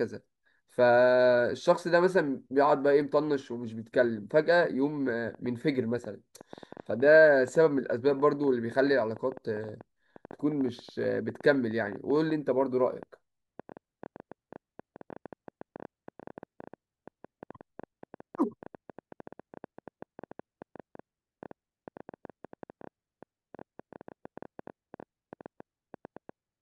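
From 5.35 s to 26.30 s, a train of clicks, some 200 ticks about as loud as the speech, pops irregularly at 8.3 per second, likely from electrical interference.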